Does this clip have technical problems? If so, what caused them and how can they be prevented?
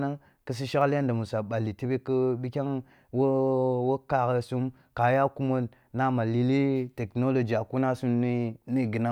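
Yes. There are two bit error spikes in this speech clip, at 0.82 s and 5.02 s. Each is a single sharp tick lasting one sample, peaking at about -32 dBFS. A single bit in a stored or transmitted sample value has flipped. That value jumps by a power of two and then drops straight back. The result is a broadband click with no relation to the speech around it. Error-correcting memory and checksummed digital links with retransmission would prevent this.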